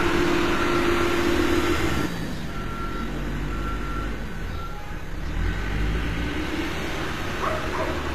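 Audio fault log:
throughout: HE-AAC compression. The treble has a gritty, metallic quality and is plainly damaged, with a sharp ceiling at 14.9 kHz. The likely cause is an HE-AAC encode around 24 kbps. At that rate only the lower spectrum is coded properly, and the upper band is rebuilt from copied lower bands. On a spectrogram the top region looks like repeated patches of the lower harmonics under a coarse, blocky envelope. Those harmonics fail to line up across the crossover, and everything above 14.9 kHz is blank.
0.00–2.06 s: doubled audio track. A second full-band copy of the sound runs roughly 150 ms behind the original at about the same level, so every event is heard twice as a dry, flat repeat with no decay or room colour. The copy is already playing when the clip begins and cuts off abruptly at 2.06 s. The likely cause is a second, slower capture path mixed in with the first. On the waveform every transient appears twice, about 150 ms apart and at nearly equal height. 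On the spectrogram each onset is duplicated across the full band until the copy stops.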